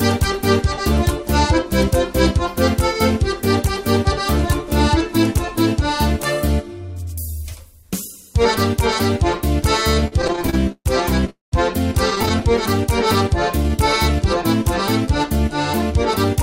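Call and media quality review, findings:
Repeated stalls (stutter), 9.91–11.30 s: 18 short gaps bridged by extended sound, longest 134 ms, about 28% of the span filled, nothing lost. Jitter buffer draining repeatedly as packets arrive late. Unlike a freeze, many brief hitches, not one hold.

Repeated stalls (stutter), 12.10–12.43 s: milder recurrence, 7 gaps, none over 12 ms, 20% of span concealed, no loss. Same late-delivery mechanism.

Call audio freeze, 11.30–11.54 s: sound stops for 224 ms, including 160 ms of silence, then resumes where it left off with nothing skipped. Likely the jitter buffer ran empty during a packet hold-up, the receiver extending then fading the last sound. Delay grows by 224 ms. Distinct from the stutter before it: one sustained drop to silence rather than rapid hitches.

Jitter buffer slow-down, 13.58–14.14 s: audio plays at about 91% speed, pitch unchanged, 60 ms added. 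Buffer rebuilding reserve by repeating single pitch periods. Unlike stalls, there are no gaps or fades, only stretching and drawn-out sound.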